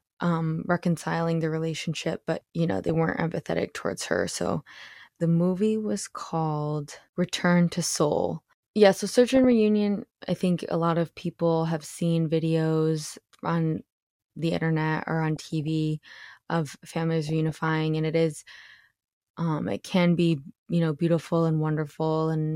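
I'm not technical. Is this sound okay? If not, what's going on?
No. There's DAB burbling, short noisy blips from weak digital radio reception, at 2.84–3.10, 9.35–9.52, 15.36–15.68 and 17.26–17.69 s.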